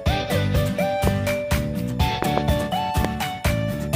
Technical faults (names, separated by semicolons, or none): loud pop